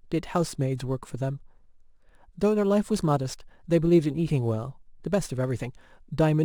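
Throughout the clip, a crude rate conversion picks the nearest existing sample instead of filtering, consistent with a 48 kHz to 44.1 kHz change. The repeating timing error adds inharmonic tones roughly 35 dB below the speech, a gritty fizz that tracks louder, brighter sounds.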